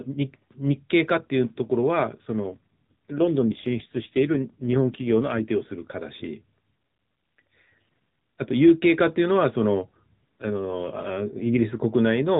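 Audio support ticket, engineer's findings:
Speech turns rougher and more synthetic from 2.42 to 5.42 s, then recovers. Same symptom again from 10.42 to 11.60 s. Band unchanged, no gaps. Probable component: AMR-NB codec on the mobile link. AMR rate drop, likely forced by the network on a weak radio link, trading speech bits for error protection. The buzzier texture fits a step down from the 12.2 kbps mode to 5.9 kbps. Outside these spans, light 12.2 kbps narrowband coloration only.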